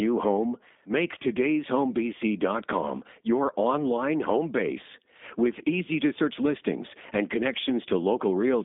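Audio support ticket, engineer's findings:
G.729 codec coding, entire clip. Speech band-limited to about 200 Hz to 3.6 kHz, nothing above 3.7 kHz. Plainly rough, buzzy, synthetic texture. Speech is rebuilt from a vocal tract filter, pitch predictor and sparse pulses. Sound fits an 8 kbit/s G.729A path.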